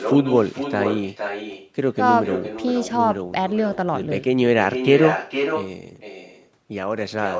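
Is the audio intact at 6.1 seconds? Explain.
No. At 6.1 seconds, as throughout the clip, there is echo with no canceller: the far end's loudspeaker feeds its microphone and the sound returns about half a second later, roughly 6 dB down, as a thinner shadow trailing the speech.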